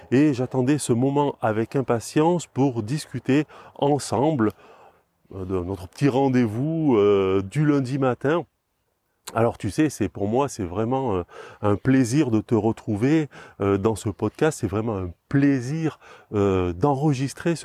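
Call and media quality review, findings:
Nothing to flag on this speech recording: listened through and there's no audible issue worth raising in the ticket.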